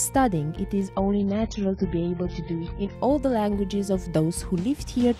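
From 0.95 to 2.95 s the adaptive stream drops to a lower bitrate, likely a slowed connection. The top end vanishes above 7.1 kHz and codec artefacts thicken, then full quality snaps back without any gap.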